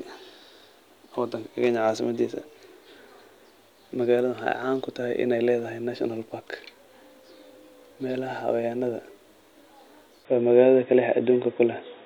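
At 10.25 s the speech abruptly turns dull and boxy, with nothing above 3.8 kHz, a slight jump in level and a faint new background hiss, with no gap at the change. This is likely an input switched to a poorer device, narrower-band microphone or headset profile, holding to the end.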